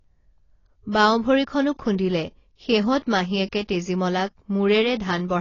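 From start to finish, the speech carries AAC compression damage. Nothing sounds above 7 kHz, so it is dull and smeared. Sibilants fizz and sustained sounds warble. The likely cause is AAC-LC coding at a low bitrate, consistent with roughly 24 kbps.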